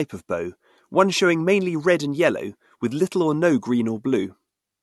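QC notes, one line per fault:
throughout: low-bitrate audio saved at a high bitrate; speech sounds smeared and coarse despite the larger MP3, likely from an earlier low-bitrate AAC encode; the spectrogram's upper bands look blotchy and patchy.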